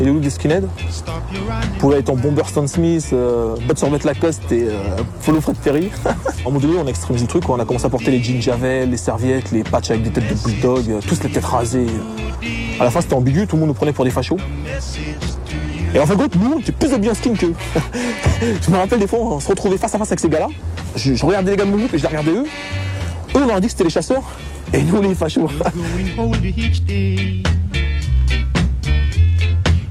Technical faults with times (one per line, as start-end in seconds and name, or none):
5.24-6.05 block size mismatch (padded)
6.42-6.47 stream segment skipped